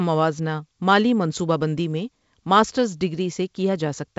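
No faults in the speech: it rides G.722 wideband coding at 56 kbit/s, with nothing above about 7.7 kHz, a light hiss in the upper band and a slightly noisier lower band from the reduced bit allocation.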